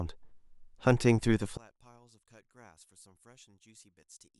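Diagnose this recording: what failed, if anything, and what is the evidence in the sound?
From 1.57 s the speech drops about 31 dB to a faint residue, likely one channel inverted in wiring, cancelling the shared centre in mono.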